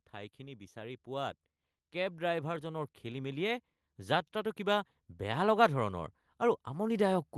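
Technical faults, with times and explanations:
1.92 s to the end, automatic gain rising: from this point the level climbs steadily, with the voice and the background noise swelling together over well over a second. That shared rise is the tell. A talker leaning toward the microphone would lift the voice more than the room, but here the gain control judged the input too quiet and raised its gain gradually. The Opus call path, limited to about 12 kHz, carries the rise unchanged.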